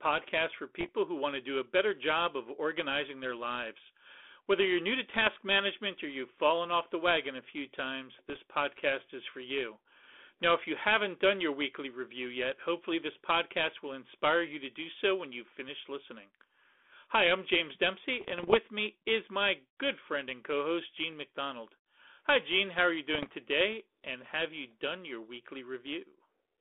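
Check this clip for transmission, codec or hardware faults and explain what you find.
Bit errors on an ADPCM link appear five times, at 0.80–0.89 s (before "who want to do"), 5.10–5.36 s, 8.29–8.41 s (between "wagon a few times" and "podcast is for you"), 18.21–18.57 s (before "me is my good") and 23.14–23.32 s. Flipped bits corrupt the decoder's step size and predictor, so each error rings on briefly: pops, rough bursts and level jumps, shown as spiky waveform excursions and broadband vertical streaks within the 300 Hz to 3.5 kHz band of the 32 kbit/s G.726 line.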